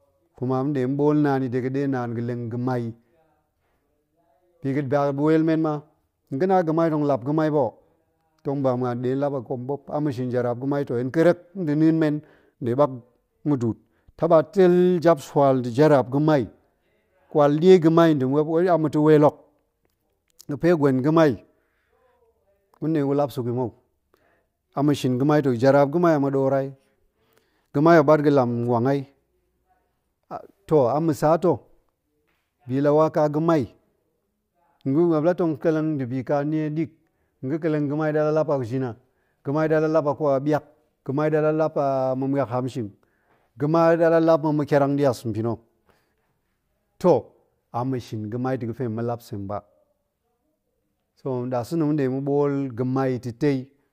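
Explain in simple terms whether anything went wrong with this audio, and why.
Nothing went wrong here, the speech comes through steady and clear without any glitches, dropouts or odd noises to point to.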